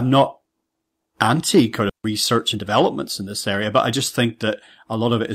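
At 1.89 to 1.91 s, right after "anti kind", playback does a skip ahead. Roughly a second of audio was discarded while later audio was already queued, and nothing fills the gap, so the two sides are joined almost directly. It sounds like an abrupt jump in the speech with a chunk missing. On a waveform the envelope changes shape at that point with no silence between. On a spectrogram the harmonic patterns break off and restart without a smooth transition.

From 1.99 s to 5.31 s a jitter buffer speed-up follows. After the jump, the buffer still held more delay than its target, so the receiver cut short pitch-period slices over and over, running the speech at about 107 % of normal speed and removing around 300 ms in total. Pitch stays the same, but the delivery sounds slightly hurried. On a spectrogram, syllables and formant movements appear compressed in time while the harmonic spacing stays unchanged.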